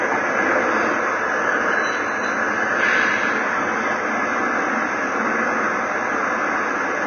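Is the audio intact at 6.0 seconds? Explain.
No. At 6.0 seconds the audio carries Vorbis compression, which runs through the whole clip. Nothing is present above 6.5 kHz, and the treble just below that cut-off is quantised so coarsely that its fine detail turns into hiss-like noise of similar energy, likely from heavy Vorbis encoding at a rate that fits roughly 20 kbps. The result at this moment is a dull, grainy, hissy sound, with roughened tones and smeared attacks.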